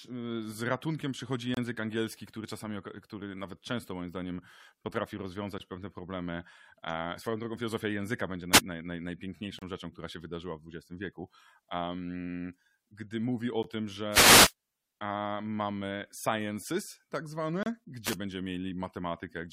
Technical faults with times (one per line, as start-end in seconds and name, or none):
1.54-1.57 gap between stream segments
5.58 gap between stream segments
8.52-8.60 wireless microphone noise hit
9.59-9.62 gap between stream segments
13.63 gap between stream segments
14.09-14.53 wireless microphone noise hit
17.63-17.66 gap between stream segments
18.04-18.16 wireless microphone noise hit